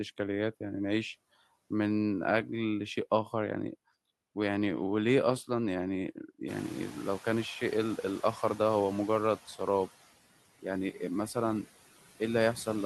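Throughout the speech, noise suppressor artifacts are audible. The background is cut by about 14 dB between phrases and swells back under them.

From 6.48 to 9.39 s, the noise suppressor is catching up. The room noise jumps by about 21 dB around six and a half seconds. The suppressor's noise estimate lags, so only about 6 dB is removed at first. The noise then sinks over 2.91 s as the estimate adapts.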